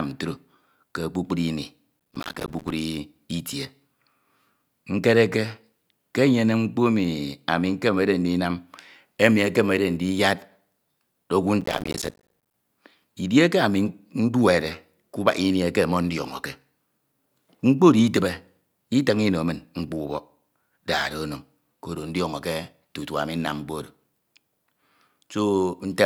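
From 2.0 to 2.71 s and again from 11.61 to 12.54 s, the speech breaks into processor overload crackle. The system could not finish its short audio buffers in time, which fits buffers of around 5 ms, and missed many in a row. Each miss drops out to silence with hard edges, giving a gritty tearing. A waveform shows dense, rapid gaps, and a spectrogram shows vertical broadband streaks across both stretches.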